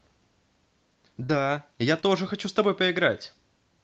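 At 1.23 to 1.31 s the sound is briefly held and fades before jumping ahead. This is a burst of packet loss: about 60 ms of audio never arrived in time, so the receiver stretched the last sound over roughly 54 ms, turning it down, and then resumed later with that stretch missing.

At 2.01 to 2.05 s a shorter smear or wobble passes by. This is short concealed packet loss: about 20 ms of audio was late, so the decoder continued the preceding sound for roughly 19 ms and blended back into the real signal, which can swallow a brief consonant. Both gaps sit in audio carried over a call codec whose response stops near 8 kHz.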